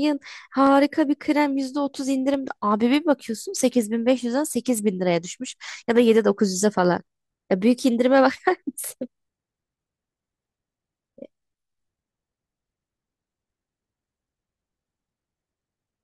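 A few samples were likely dropped from the stream at four points, each loss a small fraction of a millisecond, so the waveform leaps straight from one value to a later one. Nothing audible goes missing, but each jump is heard in the speech as a single sharp click at 0.67, 2.34, 4.52 and 6.85 s, with a thin vertical line through the spectrum at each of those moments.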